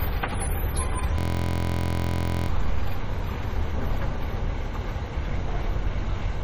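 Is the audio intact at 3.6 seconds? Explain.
No. Like the rest of the clip, the sound at 3.6 s shows transcoding between lossy codecs, likely an MP3 at about 48 kbit/s re-encoded to Vorbis at about 36 kbit/s. The second codec wastes bits on the first codec's artefacts and layers on its own, so the different artefacts are heard together, and nothing survives above 14.1 kHz.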